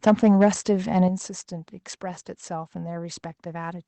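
At 1.08 s the speech and its background drop together by about 7 dB in a single step, likely a microphone volume stepped down by the call software's input control.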